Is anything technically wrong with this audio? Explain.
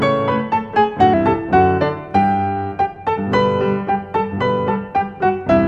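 Yes. From 1.14 s onward, a section at the wrong speed plays at 0.893x, likely a clock mismatch: slower, about two semitones lower. Spectrogram harmonics shift down and the waveform stretches.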